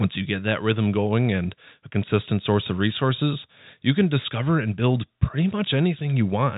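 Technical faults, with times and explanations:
No faults found in the speech; the only audible processing is the G.711 telephone coding, whose narrow band stops near 3.8 kHz.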